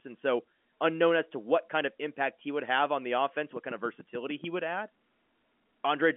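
From 3.56 s to 4.45 s, a train of clicks cuts across the speech. About seven sharp, identical ticks arrive at a regular 6.85 per second, peaking roughly 10 dB above the speech. The likely cause is interference or a faltering interface. The telephone-band background stays unaffected.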